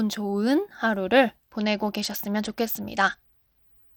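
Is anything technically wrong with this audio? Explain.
Yes. A Bluetooth SBC bit pool drop starts at 1.51 s and lasts to the end. The link's encoder cuts its bit allocation, consistent with a fall from a bit pool near 28 to about 10 (roughly 84 kbps), so the upper sub-bands starve and the rest are coarsely quantised. The speech turns dull and gritty.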